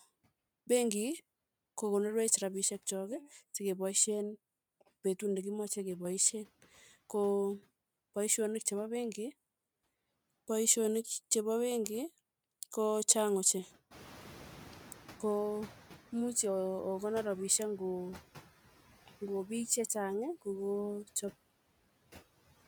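Channel delay (comb filtering) runs from 3.99 to 6.05 s. One channel lags the other by roughly 5 ms, and when the two are summed to mono, what they share cancels at evenly spaced frequencies starting near 100 Hz. The speech turns hollow and phasey, with fixed notches.

Noise suppressor catching up runs from 13.9 to 16.05 s. Room noise jumps by about 17 dB near 14 s, and the suppressor's noise estimate falls behind. At first the noise passes through with less reduction, then it sinks by about 8 dB as the estimate adapts over 2.15 s.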